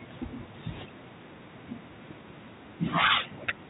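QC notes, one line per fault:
Nothing stood out on listening to this speech, which comes through a G.711 mu-law call path at 64 kbps that leaves nothing above 4 kHz.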